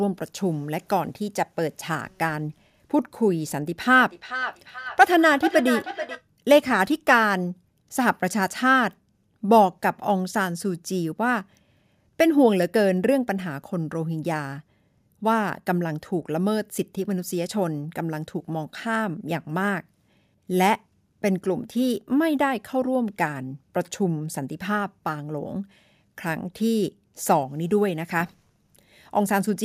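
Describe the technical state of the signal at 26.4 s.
At 26.4 s the speech signal is intact, with no audible fault at that moment.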